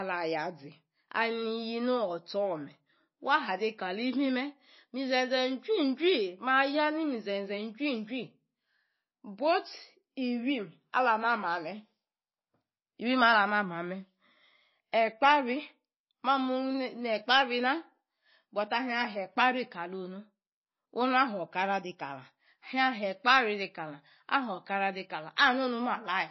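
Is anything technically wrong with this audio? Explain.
Yes, there's a problem running through the whole clip: MP3 compression damage, and it's plainly audible. The speech has nothing above 5.8 kHz, a hard treble cut that squeezed encoders apply when bits run short, and what's left has that watery, swirly quality as weak frequency components flicker in and out between frames. The s sounds get metallic and consonant attacks smear. It's likely a low-bitrate MP3, which fits something around 24 kbps.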